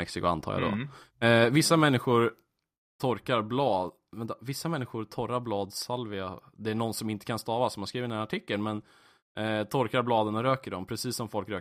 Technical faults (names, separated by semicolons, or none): microphone volume stepped down